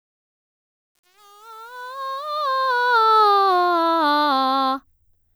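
From 0.0 to 3.22 s, the fade-in of the music carries truncation distortion on a fade. The level is held to coarse, undithered steps, which fits an 8-bit stage. Until 2.58 s the waveform shows square steps, heard as gritty distortion, with broadband hash on a spectrogram.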